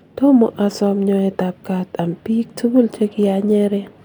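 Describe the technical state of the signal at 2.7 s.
At 2.7 s the speech signal is intact, with no dropout, distortion or other fault present.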